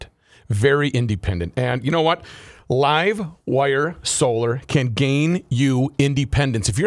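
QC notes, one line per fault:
No technical faults detected.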